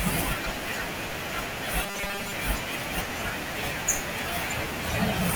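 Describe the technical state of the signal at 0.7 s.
At 0.7 s the signal is intact, with no dropout, distortion, glitch or other fault present at that moment.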